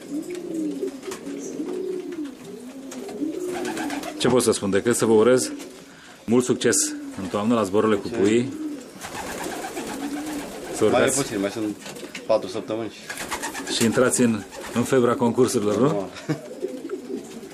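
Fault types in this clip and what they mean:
dropped buffer (overrun): The likely cause is the program failing to fetch a block of samples before the hardware overwrote it, so about 10 ms vanishes and the surrounding audio is spliced together. At 2.67 s and 6.28 s there is a small jump forward with no gap.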